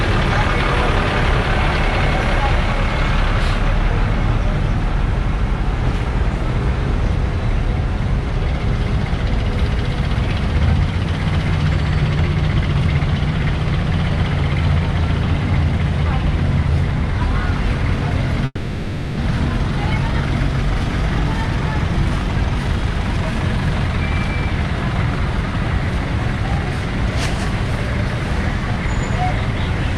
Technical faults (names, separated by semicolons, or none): call audio freeze